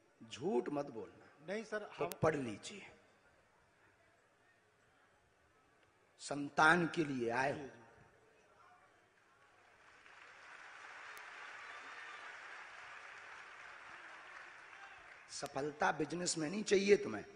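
Bit error spikes occur at 2.12, 11.18 and 15.46 s. Each is a flipped bit that jumps the waveform to about −12 dBFS, then about −24 dBFS, and is heard as one sharp broadband tick.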